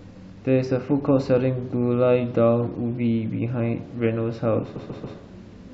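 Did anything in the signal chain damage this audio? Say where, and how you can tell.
Yes. Near the end of the speech, from 4.75 to 5.17 s, there are repeated frames, damage at the codec or storage stage where a run of compressed frames was written or delivered more than once. A block of about 139 ms, which fits a run of six frames, is played three extra times, so the sound stutters in place and the clip grows by 418 ms. On a spectrogram or waveform, the same pattern appears four times side by side.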